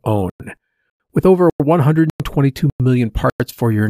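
Gap between chunks: 100 ms silences at 0.30, 0.90, 1.50, 2.10, 2.70 and 3.30 s, after half-second chunks, so the speech stutters every 0.6 s.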